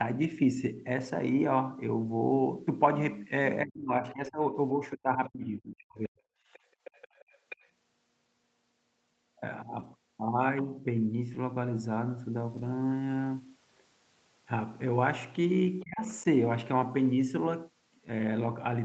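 Lost packet rebuilt from error correction, first at 2.31 to 2.33 s and again at 4.25 to 4.27 s: a single 20 ms packet went missing each time. The following packet carried a low-bitrate copy of it, which the decoder played in its place. The sound therefore never breaks off, but those instants turn briefly rougher and grainier than the material around them.

Speech suppressed in double talk, from 3.63 to 4.54 s: the level sinks by as much as about 30 dB across roughly 0.7 s of that span. It falls again from 4.75 to 6.19 s, this time down to about 40 dB, over roughly a second. The voice thins and breaks into fragments. The likely cause is the echo canceller, which could not separate the talker from the loudspeaker's echo while both sides spoke at once, and so pulled everything down.

Background gated by the echo canceller, 6.47 to 6.84 s: the canceller clamped the microphone while the loudspeaker was playing. 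The room sound drops by up to about 14 dB for around a fifth of a second, then comes back once the canceller releases.

Other side's voice leaking through, 6.53 to 6.59 s and then 6.84 to 7.68 s: a second, faint voice can be heard. The first is a brief scrap about 30 dB under the talker. The second is a longer stretch about 20 dB under. It is probably loudspeaker playback that the canceller left behind in the microphone signal.

The rebuilt packets resume at 9.79 to 9.85 s (two packets, 40 ms) and 11.33 to 11.35 s (20 ms). The longest run is at 12.49 to 12.67 s, where five packets totalling 100 ms were reconstructed. That run is a rougher, noisier patch rather than a gap. At 15.83 to 16.09 s double-talk suppression returns, with dips of about 30 dB over roughly 0.3 s. Throughout the clip, the call path's 8 kHz bandwidth limits the top end.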